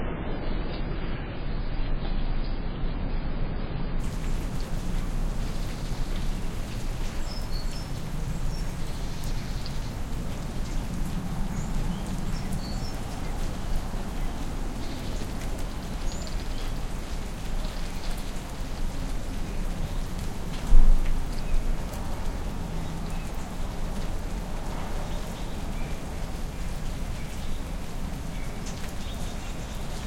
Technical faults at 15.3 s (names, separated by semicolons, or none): none